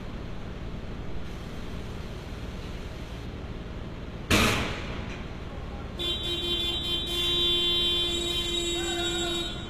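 HE-AAC compression, likely, runs through the whole clip of everyday sounds. Damage is plainly audible. Nothing survives above 14.9 kHz, and the upper band sounds synthesised rather than captured: lower bands appear copied upward and shaped by a coarse envelope, so the treble stays bright but its detail does not match the body of the sound. Bright transients turn gritty and metallic, which fits a low bitrate around 20 kbps.

Pre-emphasis left on affects the 2 s from 1.25 to 3.25 s. The treble boost applied for recording or transmission was never undone, so high frequencies stand out, about 8 dB stronger at 10 kHz relative to 1 kHz, which fits the CD 50/15 µs curve. For that stretch the audio turns thin, hard and hissy.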